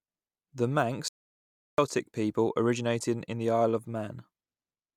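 From 1.08 to 1.78 s, an audio dropout to silence, likely lost input, leaves silence: the waveform flatlines and the spectrogram goes fully blank.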